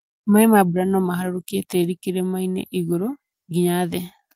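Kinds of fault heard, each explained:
Clock drift between sender and receiver: Faint, unevenly spaced timing hiccups run through the whole speech clip. The sender's audio clock runs roughly one and a half percent slower than the receiver's, so the jitter buffer keeps draining and the receiver must keep patching in extra material.
Repeated timing corrections: From 0.30 s to 4.24 s the speech plays at about 99% speed, with a slightly dragging, unsteady tempo and small stutters. The receiver repeatedly duplicates short pieces to stay in step, adding roughly 70 ms overall.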